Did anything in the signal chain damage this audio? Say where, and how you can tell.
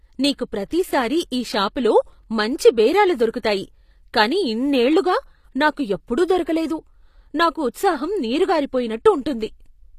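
Yes, at the codec stage, throughout the speech. The treble sounds rebuilt rather than real: s sounds come out gritty and lispy, and nothing survives above about 14.9 kHz. That's likely HE-AAC compression patching the top band from copied lower harmonics, at a rate that fits roughly 24 kbps.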